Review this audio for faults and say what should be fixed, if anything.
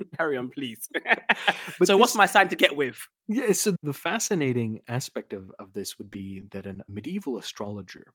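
Repeated packet loss (robotic sound) runs from 6.11 to 6.76 s, just after "of of this would". A string of brief holes, the longest 10 ms and together 50 ms, about 8% of that stretch, were each patched by extending the preceding sound, giving a choppy texture with pieces missing.

Short concealed packet loss occurs at 7.46–7.48 s and 7.64–7.66 s. In each, 10 ms of audio failed to arrive and the receiver bridged the hole by continuing the last sound, leaving a brief smear or wobble.

Both could be prevented by carrying the call on a steadier network path with a larger jitter buffer and forward error correction, so late or dropped packets are recovered instead of concealed.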